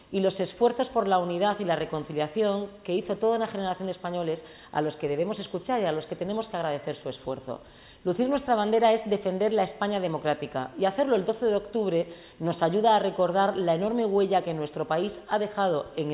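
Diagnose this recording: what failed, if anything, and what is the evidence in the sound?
Nothing here points to a failure at any stage, so there's no fault to diagnose and the recording can be left as it is.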